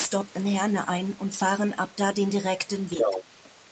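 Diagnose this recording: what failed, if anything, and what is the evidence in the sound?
The failure sits in call processing. From 2.91 to 3.24 s a second voice comes through, about as loud as the main talker. This is the other side's voice leaking through. Its likely cause is an echo canceller that left part of the far end in the microphone signal. The talker's device plays the far side on its loudspeaker. The microphone picks that up again. The residue survives and returns down the line. The band stops at 8 kHz, consistent with the call's microphone path.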